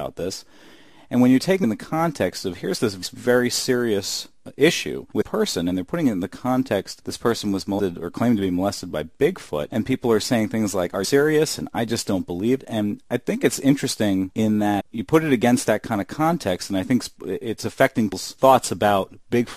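The audio jumps abruptly ahead at 1.63, 3.02, 5.20, 7.78, 11.03, 12.59, 14.79 and 18.11 s, with a brief blip or click at each join. These are compressed frames skipped: runs of 23.2 ms frames were never played, losing roughly 0.15 to 0.4 s each time.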